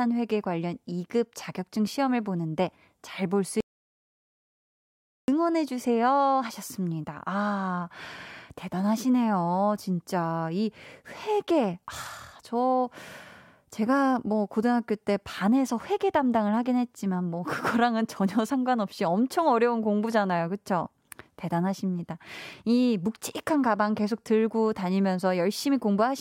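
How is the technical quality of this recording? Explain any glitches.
The recording has one clear glitch. From 3.61 s to 5.28 s there is an audio dropout to silence: the speech stops abruptly and about 1.68 s is replaced by silence, with no room tone. The likely cause is a momentary loss of the input signal while recording continued, so whatever was said in that gap is missing.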